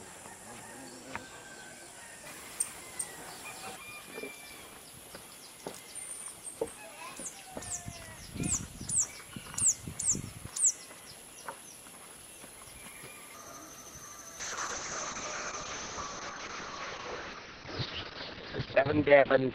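Call bitrate drop at 14.41 s, running to the end: coding turns coarse, consistent with a fall from 64 to 6 kbps, and the band above 4 kHz vanishes, leaving the sound muffled and rough.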